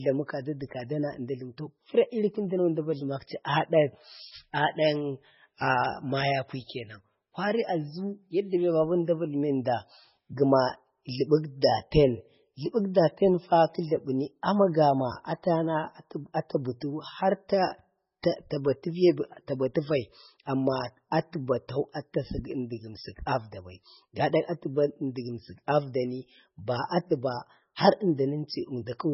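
The most likely cause is heavy MP3 compression running for the whole clip, with an encoder so starved of bits that it sacrificed the treble and thinned out everything else. Nothing survives above 5.6 kHz, which fits a bitrate around 16 kbps. The speech sounds dull and muffled, and weak frequency components flicker in and out between frames, giving it a watery, swirling texture, with s sounds turning metallic and consonant onsets smeared.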